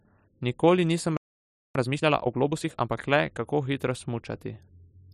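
Speech clip with a playback stall: the audio cuts to silence at 1.17 s for about 583 ms until 1.75 s, likely because the player ran short of data or its thread was blocked. A time-compressed catch-up follows from 1.75 to 2.91 s, running 1.5 times faster at unchanged pitch as small pieces are cut and cross-faded to clear the backlog.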